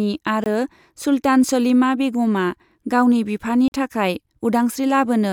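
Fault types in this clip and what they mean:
Block of digital silence: the speech drops straight to silence and back with no fade; a 20 ms gap at 0.44 s, 40 ms at 3.68 s.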